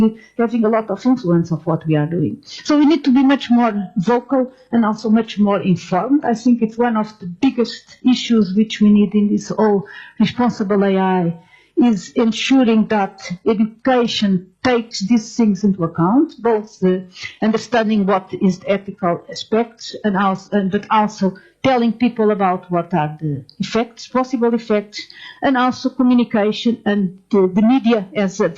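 At about 3.03 s the quality suddenly drops with no gap, and it stays down until about 21.03 s. That's an adaptive stream switching to a lower bitrate. Artefacts rise, which points to an HE-AAC stream around 16 kbit/s.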